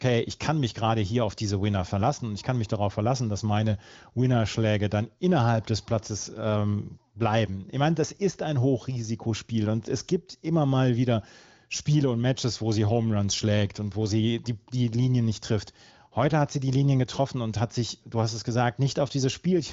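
No technical faults can be heard anywhere in this speech recording. It has passed through an AMR wideband (HD Voice) codec, audible as a band limit with nothing above about 7.5 kHz, and coding damage is faint at most, which fits one of the codec's higher rates, around 23 kbit/s.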